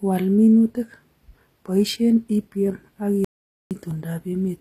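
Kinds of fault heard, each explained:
HE-AAC compression: The speech sounds like a likely low-bitrate HE-AAC encode, plainly damaged throughout. Nothing is present above 14.9 kHz. The treble is rebuilt from copied lower bands, so s sounds come out gritty and metallic rather than natural.
Dropped buffer (overrun): Two short skips are heard, at 0.75 s and 3.91 s. Each is a jump in the speech with no silence. About 10 ms goes missing at the first and about 30 ms at the second, likely from samples overwritten before collection.
Audio dropout to silence: From 3.25 s to 3.71 s the speech cuts out completely for 463 ms. There is no room tone in the gap, only digital silence. This likely comes from the input being lost while recording continued writing silence.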